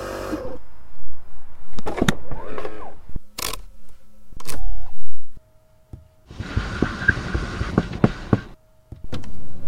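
Nothing in the recording stood out as a technical problem on listening.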